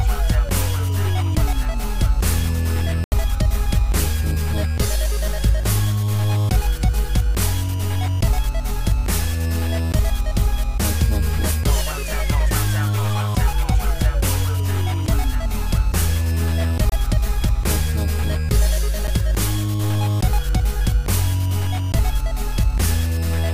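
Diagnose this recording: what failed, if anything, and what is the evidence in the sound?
Blocks of digital silence at 3.04–3.12 s (80 ms), 16.89–16.92 s and 19.07 s: likely buffer underruns left blocks of silence where the audio cuts out and back with no fade; the one at 19.07 s, about 8 ms long, is short enough to come across as a tick rather than a hole.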